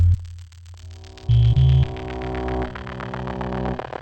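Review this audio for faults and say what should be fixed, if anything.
A stereo-read-as-mono fault runs throughout. Interleaved left and right samples are read as one channel, so the sound plays at half speed, an octave low. Set the decoder to the file's actual two-channel layout before playback.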